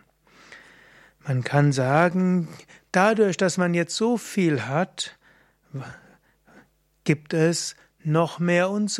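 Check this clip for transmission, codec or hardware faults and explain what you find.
Nothing stood out on listening to the speech here; no transmission, codec or hardware problem could be heard at any point.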